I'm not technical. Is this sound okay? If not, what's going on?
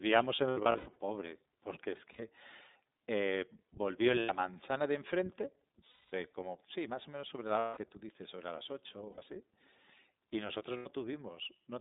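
No. The whole clip is speech squeezed through the iLBC codec, an internet-phone format. Only roughly 200 Hz to 3.7 kHz survives, so it sounds muffled and slightly robotic throughout.

There are also lost iLBC frames: brief moments where the voice smears into a held, buzzy vowel instead of going silent, then snaps back clear. These happen at 0.36 to 0.96 s (several short breaks), 2.13, 4.2, 5.91 to 6.13, 7.59 to 7.77, 9.12 and 10.77 s.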